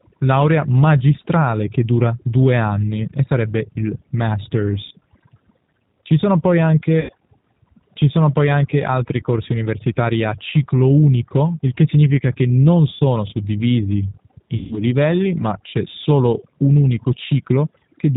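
Throughout the speech, overdone noise removal is at work. The suppressor was set so aggressively that any frequency band near its noise estimate is pulled far down or cut entirely, and the quieter parts of the voice are removed along with the noise. Pauses collapse to near silence sprinkled with twinkling specks. On a spectrogram, the gaps show as a dark field dotted with isolated bright pixels, and the speech harmonics look ragged at their edges.

Layered on this is the G.729 codec, here the G.729A variant at 8 kbit/s, with plainly audible damage. It models each stretch of speech as a vocal tract filter driven by a pitch predictor and a handful of pulses, so the result sounds slightly rough and synthetic. Nothing survives above 4 kHz, which appears on a spectrogram as a hard ceiling with empty space above it. The residual specks from the noise removal warble as they pass through the codec.

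VoIP packet loss concealed by the speech codec first appears from 7.01 to 7.12 s, where about 80 ms of audio is missing, which fits four lost 20 ms packets. It happens again from 12.94 to 13.0 s, with 60 ms missing, consistent with three packets. The longest case runs from 14.57 to 14.79 s, where 140 ms is gone, pointing to seven packets. In each gap, the decoder keeps extending its last pitch and filter shape while lowering the gain, so the sound stretches into a buzzy tone or coloured noise that fades. Because each frame builds on the one before, the voice stays weak and distorted for a short while after the audio resumes. On a waveform, each gap shows as a smooth, repetitive stretch that steadily shrinks. On a spectrogram, it appears as flat, smeared harmonic lines that fade instead of moving with the speech.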